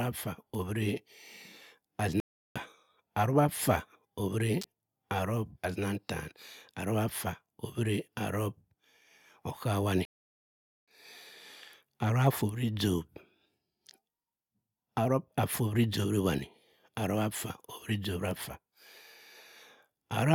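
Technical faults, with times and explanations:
2.20–2.56 s: playback stall. The speech cuts out mid-flow and the output stays silent for about 0.36 s before resuming. The sound points to the player starving for data or having its output thread blocked, most likely, so nothing reached the output until it recovered.
4.62–4.64 s: electrical switching spike. A sharp snap lasting roughly 26 ms sits on top of the speech without interrupting it. This is consistent with a short arc from a nearby switch, motor or static discharge, likely picked up by the audio line.
10.05–10.88 s: playback stall. The output drops to silence in mid-flow for about 0.82 s, a longer gap than the first, then carries on. Again the likely cause is the player running out of buffered data or its thread stalling until it recovered.
12.49 s: electrical switching spike. A single tight click lands on top of the speech with no break in the underlying sound. 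It fits one brief electrical discharge coupling into the signal path, likely from nearby switching equipment.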